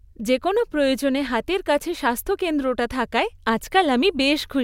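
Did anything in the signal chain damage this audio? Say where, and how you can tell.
No, nothing in the signal chain damaged this audio.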